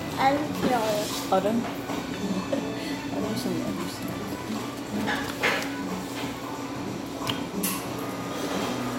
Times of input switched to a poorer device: none

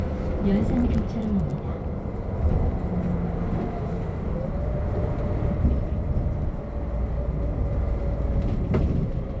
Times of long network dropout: none

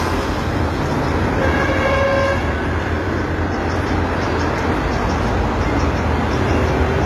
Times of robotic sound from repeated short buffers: none

